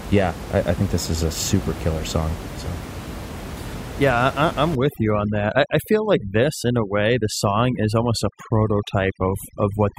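Speech, with room noise sitting about 12 dB below the voice until 4.75 s. From just after "I am", at 4.75 s, to the end, overdone noise removal takes over. Background drops and breaks up into twinkling specks. Quiet parts of the voice are cut away along with bands near the noise estimate.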